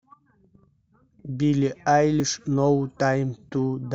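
At 0.8 s and again at 2.2 s the speech jumps forward, skipping roughly 40 ms with no gap of silence. This is likely a dropped buffer (overrun), where unread samples were overwritten and the surrounding audio spliced directly together.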